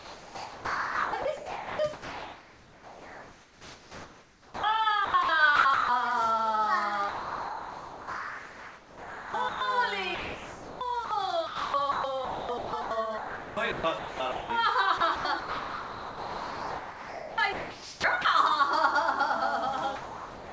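Sound chopped by the voice detector runs from 0.0 to 5.89 s, 7.09 to 9.61 s and 10.15 to 18.25 s. About 4.7 s, 2.4 s and 5.1 s of those stretches are replaced by comfort noise, likely because the sender's detector kept toggling transmission off and on, so the audio stutters. Sound dropped by the voice detector follows at 19.96 to 20.52 s. The final 0.56 s gives way to steady comfort noise, likely because the detector judged that closing sound to be background and stopped sending. The whole clip arrives through a G.722 call path with nothing above 8 kHz.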